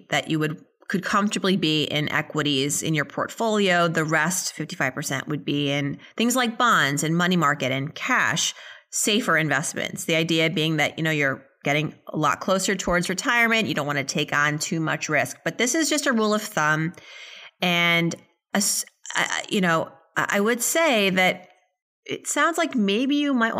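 No technical faults turn up anywhere in the speech recording, and the signal holds steady and intact throughout.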